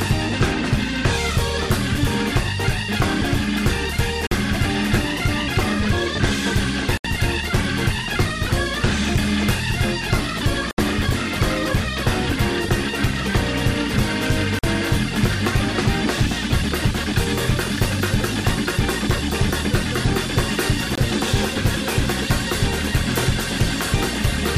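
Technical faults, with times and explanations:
4.27–4.32, 6.98–7.05, 10.71–10.78, 14.59–14.64 and 20.95–20.98 s: Bluetooth dropout. The sound cuts to silence for about 23, 46 or 70 ms, which fits losing one to three wireless packets of roughly 23 ms each. It resumes further along, as though it had kept playing. On a waveform these are flat gaps, and on a spectrogram they are blank vertical bands with sharp edges. A late wireless link is the likely cause.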